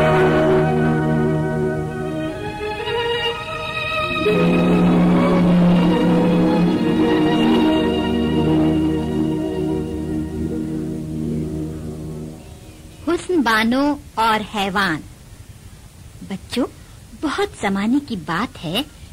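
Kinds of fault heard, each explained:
No kind of fault is heard in this clip.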